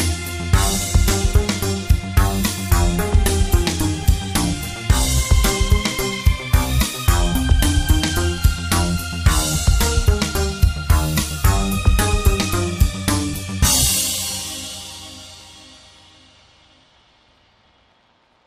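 No technical faults are audible.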